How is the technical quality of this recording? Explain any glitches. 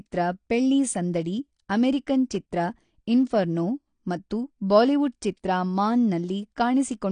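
The technical quality is poor, with one fault running through the whole speech clip. The likely cause is AAC compression at a low bitrate, which fits roughly 32 kbps AAC-LC. Starved of bits, the encoder cuts off everything above 9.8 kHz and coarsely quantises the rest, so the audio sounds plainly dull and smeared, with a fizzy, warbling edge on sibilants.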